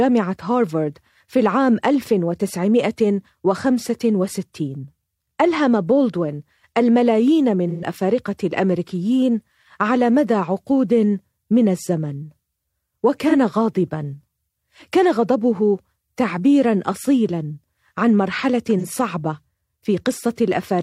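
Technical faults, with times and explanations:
7.69–7.85 s, 13.28–13.34 s and 18.78–18.85 s: AAC frame loss with concealment. The decoder reuses the last good spectrum, giving short smeared, phasey patches. The first gap is 128 ms, about three frames' worth, and the others are 43 ms each.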